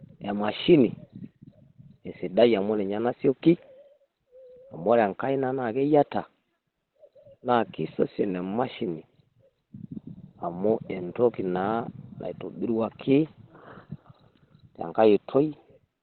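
From start to finish the speech sounds muffled and hoarse, with a thin telephone-like quality and nothing above 4.2 kHz. The damage is heavy and steady across the whole clip. This is likely Opus compression at a very low rate, near 12 kbps, where the encoder falls back to its SILK speech mode and narrowband coding. The high frequencies are discarded and the remaining voice is rebuilt coarsely, which accounts for the roughness and the closed-in tone.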